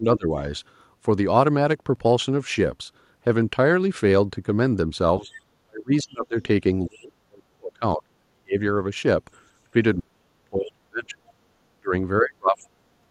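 Speech suppressed in double talk opens the clip, from 0.0 to 0.38 s. The speech dips by about 15 dB, likely because the echo canceller could not tell the talker from the loudspeaker echo while both sides spoke, and turned everything down.

Processor overload crackle follows at 1.8 to 1.99 s. It is a brief gritty burst of tiny, hard-edged silent gaps. That fits a run of several missed deadlines on very small buffers of around 1.5 ms, until the processor catches up.

Suppression returns at 5.21 to 5.29 s with a shallower dip of about 10 dB.

Other side's voice leaking through appears at 5.32 to 5.4 s and again at 6.95 to 6.99 s. Each is a faint scrap sitting far below the speech, likely loudspeaker echo that the canceller failed to remove.

Deeper suppression cuts the speech by up to about 35 to 40 dB at 5.65 to 6.36 s, 6.86 to 8.59 s, 9.73 to 11.36 s and 11.81 to 13.09 s.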